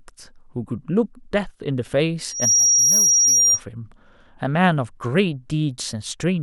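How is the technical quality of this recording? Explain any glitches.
The recording has one real problem, a burst of loudspeaker feedback squeal. From 2.27 to 3.61 s, the mic is catching the speaker it feeds, and the loop runs away at 5.7 kHz. That swells over about a third of a second into a piercing whistle, sitting a few dB above the speech until it cuts off.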